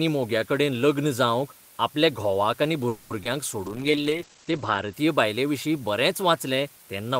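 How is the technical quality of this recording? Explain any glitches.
Rough overall: a steady hiss sits under the whole thing, and there's a cluster of call glitches between about 2.9 and 5 seconds.

Low bit depth with dither: the hiss runs from start to finish, only about 25 dB below the speech, which fits an 8-bit signal with dither added before rounding. Dither turns the rounding error into even, constant white noise, so you get hiss rather than gritty distortion.

Call audio freeze: from 2.88 to 3.11 s the last bit of sound is stretched into a fading buzz or hiss for 220 ms, then the speech resumes exactly where it left off with nothing lost. The likely cause is packets held up in transit, leaving the jitter buffer empty so the receiver had to improvise.

Short concealed packet loss: at 3.23 to 3.26 s about 20 ms of audio never made it to the decoder. The receiver papered over the hole by extending the preceding sound and blending back in, so it comes across as a quick smear or wobble.

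Call bitrate drop: from 3.67 to 4.99 s, ending just before "बायलेविशीं बरेंच", the speech turns muffled and watery. The top end falls from 20 kHz to 8 kHz for about 1.1 s, which fits the encoder being cut from around 32 to 12 kbps after the bandwidth estimate fell.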